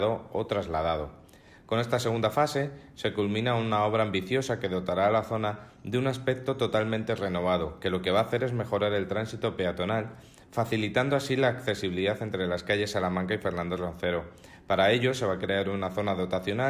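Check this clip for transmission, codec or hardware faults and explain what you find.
No transmission, codec or hardware faults can be heard anywhere in the clip. There is nothing that needs explaining.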